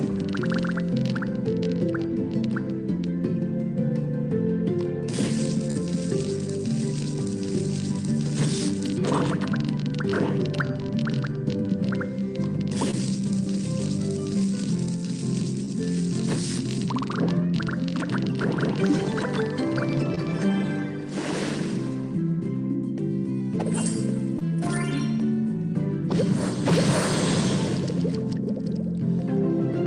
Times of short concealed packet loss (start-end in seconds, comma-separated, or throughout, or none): 5.71-5.77, 12.91-12.95, 15.65-15.69, 20.15-20.19, 24.39-24.42